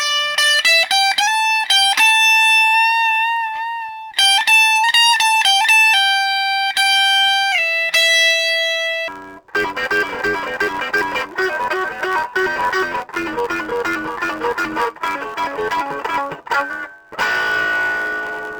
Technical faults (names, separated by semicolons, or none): interleaved audio read as planar